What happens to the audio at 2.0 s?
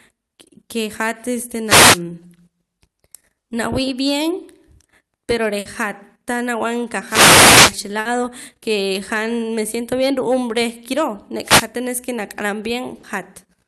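At 2.0 s the sound is at the tail of a wireless microphone noise hit running from about 1.65 to 2.01 s. The analogue FM radio link faded as reflected signals partly cancelled the direct one, so the receiver's own noise rose up to cover the signal. That is heard as a brief swish of static lasting about a third of a second, which clears just after 2.0 s.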